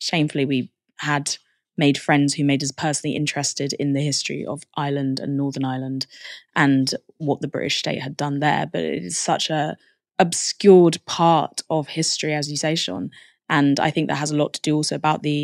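From 0.13 to 15.42 s, clock slip clicks form a soft rattle, about twenty per second. Likely two unsynchronised clocks, roughly 400 ppm apart, each slip skipping or repeating one sample.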